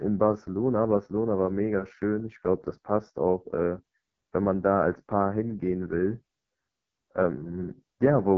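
From start to finish, the speech carries heavy AMR wideband (HD Voice) codec damage. Nothing is heard above 7.2 kHz. The rough, raspy texture fits the lowest 6.6 kbit/s rate. Starved of bits, the vocal tract model turns voiced sounds gritty and buzzy.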